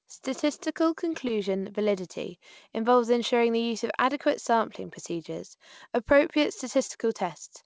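At 1.28 to 1.31 s, just before "validity involves ensuring the", and again at 6.87 to 6.91 s, right after "adequate sampling procedures appropriate", there is short concealed packet loss. A gap that fits a single 20 ms packet arrived too late, so the receiver extended the preceding sound and crossfaded back. Each spot is heard as a brief smear. A spectrogram shows a blurred, smoothed patch, all below the 8 kHz ceiling of the G.722 call path.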